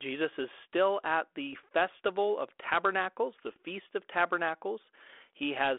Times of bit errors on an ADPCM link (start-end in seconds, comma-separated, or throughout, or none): 1.53-1.64, 3.39-3.57